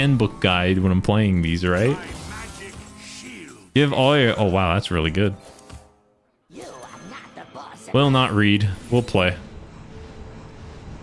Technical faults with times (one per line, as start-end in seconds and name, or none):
none